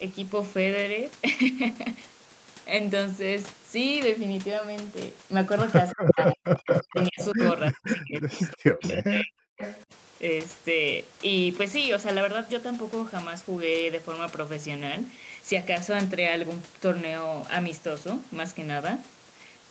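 Speech, with echo leak at 5.91–7.44, 7.86–8.93 and 9.59–9.84 s. A copy of the voice returns 343 ms late, first about as loud as the speech, then about 5 dB and 10 dB quieter. A far-end loudspeaker echo the canceller failed to remove is the likely cause. The same span shows speech suppressed in double talk, at 5.95–6.48 and 6.81–9.61 s. The voice drops by as much as about 40 dB in pieces, for roughly half a second and then two seconds. Both sides talking at once likely made the canceller duck the talker along with the echo.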